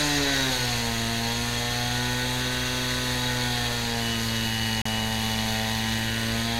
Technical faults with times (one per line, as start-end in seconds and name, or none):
4.82-4.85 CD skip